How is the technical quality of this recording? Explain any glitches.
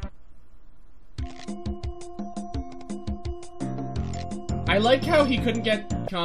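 There is one glitch, right at the end. At 6.07 s there is damaged data in a compressed stream. Part of the encoded file is wrong there. The decoder misreads that frame, loses sync and hunts for the next valid header. The result is a very brief chirp or blip.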